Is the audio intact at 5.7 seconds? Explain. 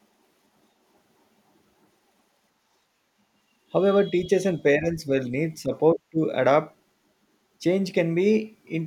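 No. At 5.7 seconds the speech sits inside a brief dip from 5.62 to 5.72 s, about a tenth of a second, where the level falls by around 10 dB. This is speech suppressed in double talk, likely the echo canceller mistaking the talker for loudspeaker echo while both sides spoke and turning everything down. It sounds like a momentary duck in loudness. On a waveform the envelope visibly narrows for that span; a spectrogram shows the energy fading across the band, then recovering.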